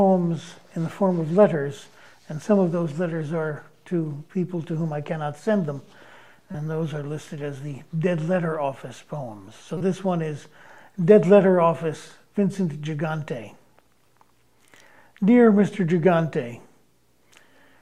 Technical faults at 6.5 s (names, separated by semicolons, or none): corrupt frame decoded